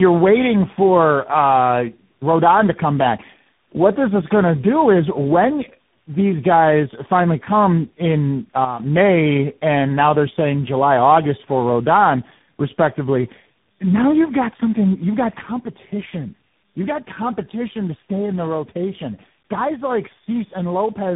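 Throughout, the speech shows tandem speech coding: three speech coders in a row, a chain that points to GSM full rate, AMR-NB and CVSD, each re-coding the last one's damage. It sounds rough, muffled and warbly. A spectrogram shows nothing above 3.8 kHz and smeared, blotchy harmonics.

From 8.65 to 8.80 s there is a sudden gain jump. Speech and background noise drop together by about 8 dB for 150 ms, then snap back, likely from a gain change applied without a ramp. The waveform envelope steps down and up with vertical edges.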